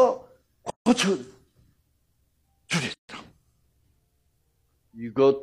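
The audio has two gaps at joins of encoded pieces, from 0.70 to 0.86 s (about 160 ms) and 2.94 to 3.09 s (about 150 ms), where separately encoded sections were butted together with their start delay and end padding left in. Unlike a dropout, nothing is lost: the sound resumes where it stopped, across smeared edges.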